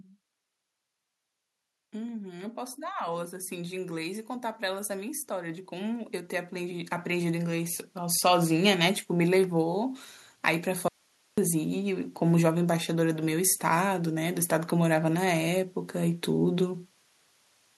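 From 1.75 s to 10.04 s the automatic gain control rises. It judged the input too quiet and raised its gain slowly, by about 16 dB. The speech and the background swell together over those eight seconds. Nothing in the sound itself changes. Only the level climbs, so the room noise grows as much as the voice.

At 10.88 s the speech cuts out abruptly, an audio dropout to a faint residue. It lasts about 0.5 s and returns at 11.38 s. The gap holds only hiss, roughly 40 dB below the speech. The path after the break stayed live while the wanted signal was lost, likely through an interruption upstream of it. The cut is sharp, not a pause or a fade.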